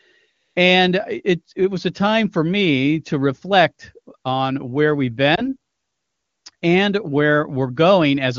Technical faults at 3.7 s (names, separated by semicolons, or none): none